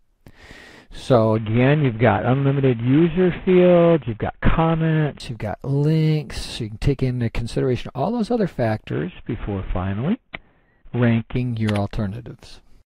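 From 1.35 to 5.2 s, and again from 8.92 to 11.36 s, the treble goes dull and a gritty noise creeps in. That's a Bluetooth SBC bit pool drop, which fits the pool falling from 28 to 4, about 48 kbps. The top sub-bands starve and the rest gets coarsely quantised.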